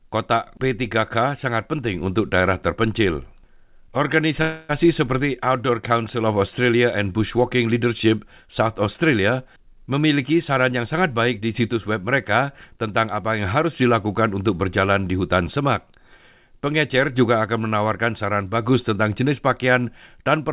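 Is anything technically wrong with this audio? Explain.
Yes, there are two faults.

From 4.42 to 4.71 s there is a call audio freeze. Packets were likely held up in transit, so the jitter buffer ran dry and the receiver stretched the last sound into a fading buzz or hiss for 270 ms. The audio then resumes where it stopped, adding delay but losing nothing.

From 9.56 to 11.69 s, just before "web mereka tentang apa", there is a jitter buffer speed-up. The buffer held more audio than its target, so the receiver cut out many short pitch-period pieces, about 0.3 s in all. The speech runs at 113% speed, sounding hurried but at the same pitch, through a narrowband call path with nothing above 4 kHz.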